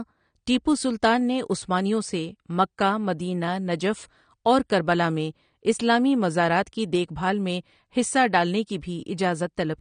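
AAC compression damage runs through the whole speech clip: nothing sounds above about 9.7 kHz, and sibilants carry a fizzy, warbling smear. The likely cause is AAC-LC coding at a low bitrate, around 32 kbps, which lowers the cut-off and quantises the remaining bands coarsely.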